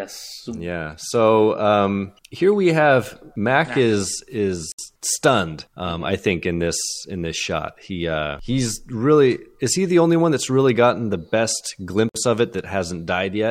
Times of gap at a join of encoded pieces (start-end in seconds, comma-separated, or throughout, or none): 4.72-4.79, 12.09-12.15